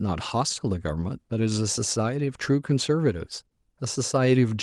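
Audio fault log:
No faults are present: the speech has come through a call codec and jitter buffer operating as intended, with its top end rolled off at about 12 kHz, consistent with super-wideband call coding.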